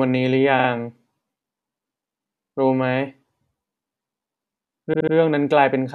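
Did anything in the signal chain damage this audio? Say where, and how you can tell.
Yes. Repeated frames at 0.58 s, 2.44 s and 4.93 s give the speech a stutter. A 46 ms block plays two extra times at the first two points, and a 70 ms block plays three extra times at the last. That fits compressed frames being duplicated at the codec or storage stage, which stretches the audio by about 0.4 s in total.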